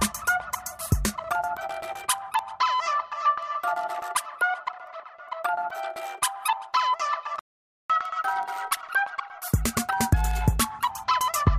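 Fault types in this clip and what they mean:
word clock ticks: Single-sample slips repeat at a steady interval of roughly 0.2 s from 0.11 s to the end, consistent with a receiver clock running about 100 ppm away from the sender. The even spacing distinguishes them from random clicks or dust crackle.
playback stall: The audio goes silent mid-flow from 7.39 to 7.90 s, about half a second, likely because the player ran out of buffered data or its thread was blocked. Unlike a dropout within the recording itself, the gap is followed immediately by a speed-up.
catch-up at higher speed: From 7.90 to 10.90 s the sound plays 1.1 times faster, raising pitch by roughly a semitone and a half, then drops back to normal. Speed and pitch rise together right after the stall, so this is not slow wow or gradual drift.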